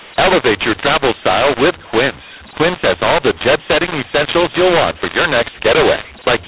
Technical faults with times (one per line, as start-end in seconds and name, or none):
0.00-6.47 mu-law and A-law mixed up